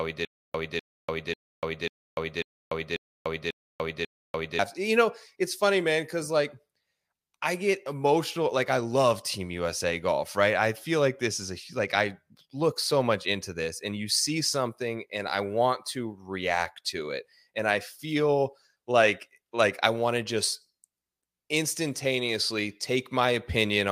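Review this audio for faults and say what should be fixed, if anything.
Stutter with silent gaps, from the start of the clip to 4.59 s. The same 0.25 s burst of speech plays eight times, each followed by 0.29 s of digital silence, so it returns every 0.54 s. The speech that belonged in that span is missing. The likely cause is a stalled player or stream that replayed its last fragment at each retry and then ran empty. Deeper playback buffering, with a stall handled by waiting rather than looping the last fragment, would prevent it.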